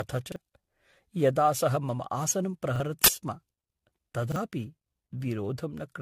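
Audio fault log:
throughout generation loss: swirly, smeared, hollow sound with blurred attacks and nothing above 13.9 kHz, likely from AAC-LC at 64 kbit/s re-encoded around seven times.
0.32–0.36 s, 2.76–2.80 s, 4.32–4.36 s repeated buffer: a brief stutter with a hard join as a 40 ms piece plays twice, because the device replayed its last buffer when new audio arrived late.
3.04–3.08 s uninitialised buffer: a sudden 40 ms burst of digital noise, because the buffer played before audio was written and leftover memory was read as samples.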